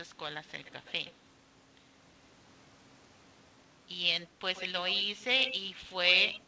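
Speech over a call with an echo leak: a faint delayed copy of the talker trails about 119 ms behind at 0.49–1.12 s and 4.21–4.25 s, then gets noticeably louder at around 105 ms across 4.55–5.24, 5.42–5.55 and 6.10–6.41 s. That's likely a loudspeaker at the far end getting past its echo canceller.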